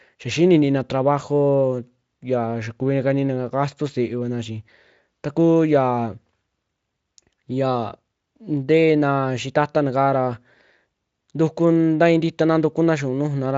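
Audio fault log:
No faults detected.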